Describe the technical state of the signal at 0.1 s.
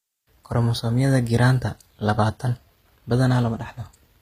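At 0.1 s the treble sounds synthetic: sibilance has a gritty, metallic, lispy edge, and nothing reaches above about 15.5 kHz. This persists across the whole clip and is likely HE-AAC compression at a low bitrate, one that fits roughly 24 kbps. Only the lower spectrum is truly coded, and the upper bands are rebuilt by copying lower content upward under a coarse envelope, so harmonics fail to line up across the crossover.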